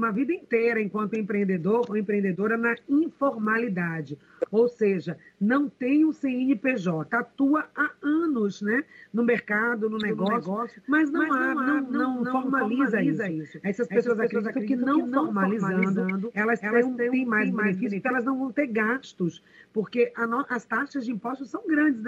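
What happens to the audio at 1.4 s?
Nothing goes wrong at 1.4 s: the audio plays through that moment intact, with no dropout, click or distortion.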